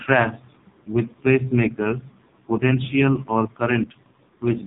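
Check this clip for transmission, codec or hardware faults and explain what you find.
One codec fault runs through the whole recording. The AMR narrowband mobile codec (AMR-NB) is present from start to finish. It rebuilds the speech from a compact vocal-tract model excited by a few pulses per short subframe, and here the damage is heavy, which fits one of its lowest modes, around 5 kbps. Nothing above about 3.8 kHz survives, so the speech sounds dull and boxed-in, and its texture turns buzzy and synthetic.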